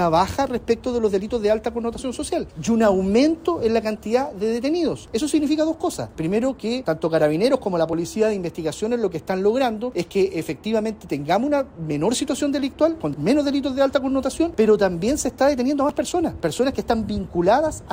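At 1.95, 5.94, 7.93, 9.92, 11.91 and 15.89 seconds the sound jumps. This is overlap between stream segments. The events fall near the boundaries of 2-second segments. At each one, the timestamps of adjacent segments overlap. The player then discards that stretch even though it was never duplicated. Between 8 and 16 ms of audio is lost each time. The waveform skips forward, and this is heard as a tiny skip.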